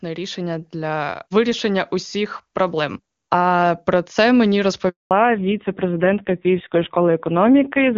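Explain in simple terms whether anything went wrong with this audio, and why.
Three things go wrong in this speech clip.

First comes automatic gain rising, from 0.05 s to about 4.15 s. The phone decided the input was too quiet and turned its own volume up. It did this slowly, over about four seconds. So the voice and the background noise behind it grow louder together. The phone's automatic level control simply kept nudging the volume upward.

Next is a handover gap, from 4.89 s to 5.11 s. The call was passed from one network connection to another. During the switch, no sound got through at all. The voice fades out very quickly, then there is about a fifth of a second of silence. Anything said in that moment is gone for good. It cannot be recovered from the recording.

Right after the gap, at 5.11 s, comes a fallback to narrowband, lasting to the end of the clip. Before this point the call used HD Voice, which carries crisp high sounds and sounds clear here. 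After the switch, the call runs on an older, lower-quality phone codec. Everything above 4 kHz is missing. The voice turns duller and muffled, and also a bit rough and grainy.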